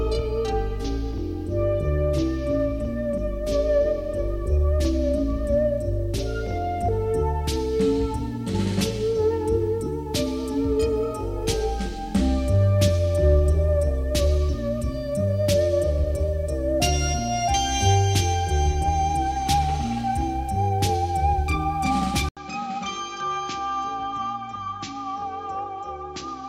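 At 22.29 s the audio drops out for 80 ms, then continues to the end at 26.48 s sounding duller and boxier, with nothing above 7.6 kHz, a level roughly 10 dB lower, and a new background noise sitting far below the signal. This is the signature of an input switched to a poorer device, most likely a change to another microphone or a headset profile. A plain low-pass filter or gain change would not bring the gap and a different noise floor together.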